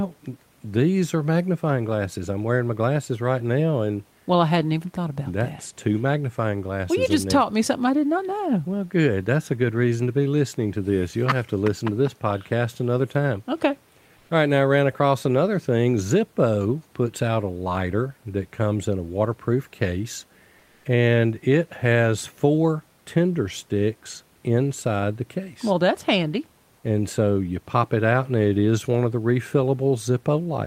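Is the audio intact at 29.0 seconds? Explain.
Yes, the audio is intact at 29.0 seconds, with only the room's own background noise, about 39 dB below the speech, sitting faintly underneath.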